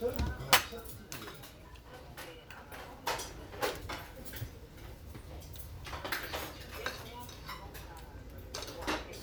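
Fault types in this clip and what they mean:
No technical faults can be heard in this recording of sounds, with nothing to pick out in how the signal holds together across its run.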